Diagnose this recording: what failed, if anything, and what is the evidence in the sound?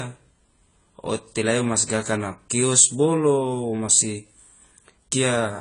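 Throughout, the speech is dull and smeared, with nothing above 10 kHz and a fizzy, warbling texture on sibilants and held sounds. That points to the codec stage, likely AAC compression at a low bitrate, which fits about 24 kbps AAC-LC discarding high bands and coarsely quantising the rest.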